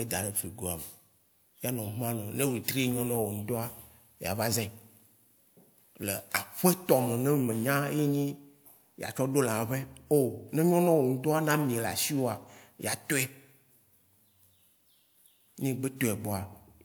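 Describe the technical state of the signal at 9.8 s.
At 9.8 s the speech signal is intact, with no audible fault at that moment.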